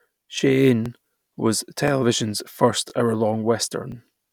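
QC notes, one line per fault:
0.86–0.88, 1.88–1.90, 2.90–2.92, 3.92–3.94 s: overlapping chunks. Each 1 s chunk restarts early, replaying about 21 ms. This is heard as a regular stutter.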